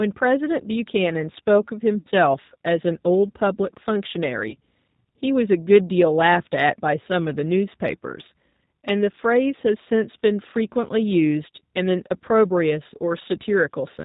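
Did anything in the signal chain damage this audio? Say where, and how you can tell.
Yes. At the codec stage, the whole clip has the plainly audible roughness of G.729 coding. Speech sounds slightly synthetic and rough, with nothing above 4 kHz. This fits the 8 kbit/s codec, which rebuilds each 10 ms frame from a vocal tract filter, a pitch predictor and sparse pulses.

At the network stage there are two gaps where VoIP packet loss was concealed by the speech codec: 2.00 to 2.08 s, covering 60 ms of lost audio (consistent with two packets), and 4.50 to 4.56 s, covering 30 ms (consistent with one). In each gap the decoder repeats its last pitch and filter state at falling gain, giving a brief fading smear instead of a clean dropout.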